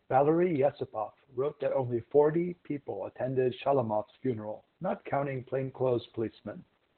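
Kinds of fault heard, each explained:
Opus voice compression: The speech runs through a low-rate linear-prediction voice coder, heard as a narrowband, muffled, hoarse and faintly robotic sound with nothing above about 4.3 kHz. The damage is heavy, which fits roughly 8 kbps. The coarse, buzzy excitation sets it apart from a plain low-pass filter.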